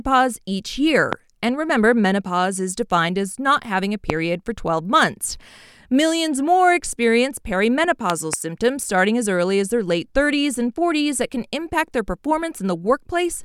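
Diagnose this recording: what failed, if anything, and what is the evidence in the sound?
A loud pop fault, likely in the analogue wiring, from a plug, switch or static. Sharp pops land at 1.13 to 1.15 s and 4.10 to 4.12 s, around 20 dB above the speech. A double pop spans 8.10 to 8.35 s, around 15 dB up. A voltage pulse rides on top, and the speech continues underneath.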